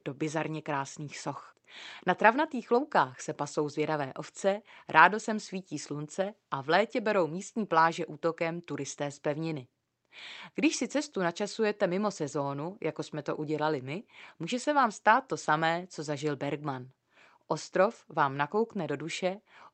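Nothing stood out on listening to this speech recording.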